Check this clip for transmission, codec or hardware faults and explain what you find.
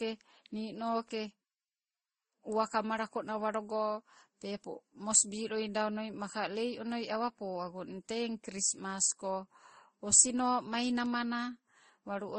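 The speech carries transcoding between lossy codecs from start to finish, heard as layered compression artefacts. The sound points to several low-bitrate stages, likely MP3 then Vorbis then Opus at around 30 kbit/s each. Each encoder spent bits on the previous one's artefacts and then added its own. The narrowest band limit survived, so nothing reaches above 9.6 kHz. A spectrogram would show a hard ceiling there, with blotchy, patchy high-frequency texture beneath it.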